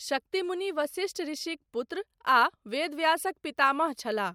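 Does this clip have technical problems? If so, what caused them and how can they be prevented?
No, no technical faults.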